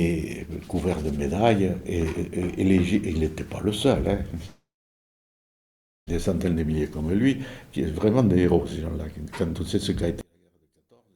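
A long network dropout, likely lost packets, stops the audio from 4.45 to 6.09 s: about 1.6 s never arrives, a brief fading fill gives way to roughly 1.4 s of near-silence, and playback resumes further on. From 10.21 s to the end, one channel likely inverted in polarity cancels the shared content in mono, dropping the level by about 38 dB and leaving only a faint difference signal.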